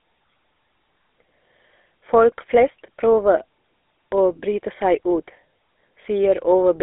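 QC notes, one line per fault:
throughout, GSM full-rate codec: a telephone path (300 Hz to 3.6 kHz) and a coder that rebuilds the voice from a vocal-tract model driven by sparse, regular pulses, which fits 13 kbps GSM full rate. Nothing passes 3.8 kHz, and the speech sounds plainly buzzy and gravelly.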